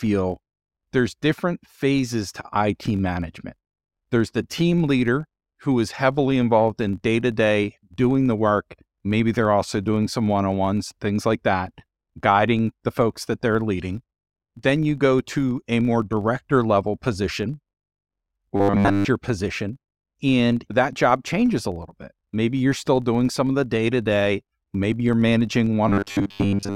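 Speech clip with a filter restarted on every block throughout: each block begins from a reset state, so a small transient ticks at about 46.9 Hz, consistent with 1024-sample blocks. It sounds like a buzz that rises and falls with the speech level, and a spectrogram shows evenly spaced faint vertical stripes. From 18.56 to 19.05 s, and again from 25.88 s to the end at 26.76 s (most of that stretch), the voice turns into robotic sound, likely from repeated short buffers: a 10 ms chunk loops, imposing a rigid 100 Hz metallic buzz. The waveform shows identical repeating cycles, and the spectrogram shows flat horizontal harmonics at multiples of 100 Hz.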